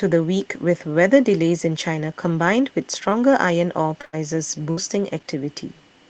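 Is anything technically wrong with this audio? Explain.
Yes. The speech, which passes through a call codec and jitter buffer whose top end stops near 8 kHz, has two kinds of packet-loss damage.

Short concealed packet loss occurs from 3.09 to 3.13 s and from 4.01 to 4.05 s. About 20 ms of audio failed to reach the decoder in time each time, and the receiver filled the hole by extending the preceding sound before blending back into real audio. Each spot is heard as a brief smear or wobble, and any short consonant falling there can disappear.

A burst of packet loss follows at 4.05 to 4.15 s, directly after the second short loss, and again at 4.71 to 4.79 s. Here about 80 ms and 60 ms went missing in one stretch. The receiver kept the last sound going while fading it down, which produces a held buzz on voiced sound or a dying hiss otherwise. Speech then resumes further on, with the intervening portion simply gone.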